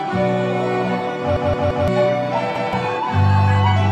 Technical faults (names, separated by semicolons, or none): repeated buffer